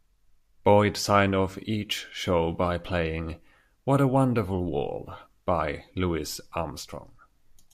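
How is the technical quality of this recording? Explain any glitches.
No glitches to report: nothing in the recording registers as a technical fault.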